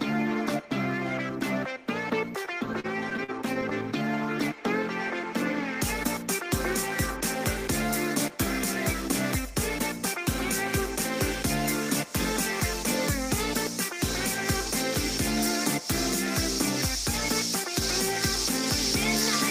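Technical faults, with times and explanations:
2.45–3.73 s, repeated stalls (stutter): packets arrived late, so the jitter buffer kept running dry, and the receiver stretched the last sound across twelve short waits of up to 45 ms, about 177 ms in all, with nothing lost, so the audio drags and stutters.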